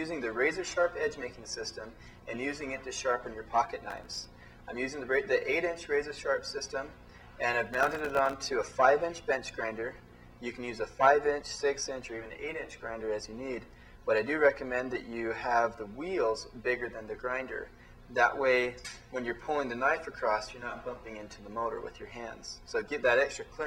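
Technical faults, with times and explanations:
3.90–4.24 s and 7.66–8.33 s, processor overload crackle: the processor falls behind and misses a whole string of buffer deadlines, each leaving a tiny hard-edged silent gap. The grit suggests very short buffers, around a millisecond and a half, so the gaps blur into tearing crackle until the load eases. The second burst runs longer.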